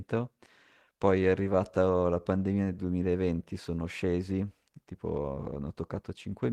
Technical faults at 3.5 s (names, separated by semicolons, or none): none